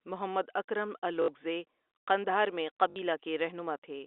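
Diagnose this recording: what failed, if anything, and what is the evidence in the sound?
Network stage: packet loss with last packet repeated, at 1.22–1.28 s and 2.90–2.96 s (after "قندھار میں"). Each 60 ms gap is refilled by replaying the last packet, which gives a 50 Hz robotic stutter rather than the silent gap of a plain dropout.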